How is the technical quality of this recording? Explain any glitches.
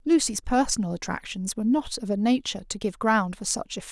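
No glitches or technical faults can be heard anywhere in the speech, so there is nothing to explain.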